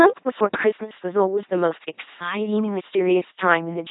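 Throughout, the speech has a harsh, buzzing robotic quality, with nothing above about 3.9 kHz and heavy damage. This is the sound of an LPC-10 vocoder, consistent with 2.4 kbit/s. It rebuilds each moment from a simple filter excited by either a pulse train or noise, never a mixture.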